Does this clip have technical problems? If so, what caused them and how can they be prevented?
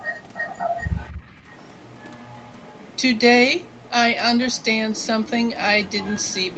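Yes. The fault is an echo leak, and the likely cause is a far end playing the call on a loudspeaker where the echo canceller failed to fully remove what its microphone picked up, so the residue was sent back. The result is a faint copy of the speech trailing it by 243 ms, from 0.0 to 3.21 s, then in scraps at 3.6 to 3.92, 4.51 to 4.66, 4.93 to 5.07, 5.23 to 5.31 and 5.55 to 5.65 s, and again from 5.85 s to the end. It is loudest in the first stretch, about 15 dB below the speech, and elsewhere roughly 20 to 30 dB down. Using a headset at the far end, or giving its echo canceller a correct delay estimate and enough suppression, would prevent it.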